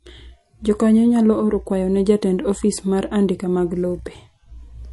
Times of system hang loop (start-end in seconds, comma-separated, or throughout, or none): none